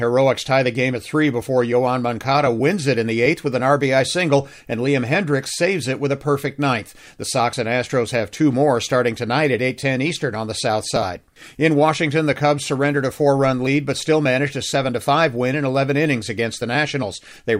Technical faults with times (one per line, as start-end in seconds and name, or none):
none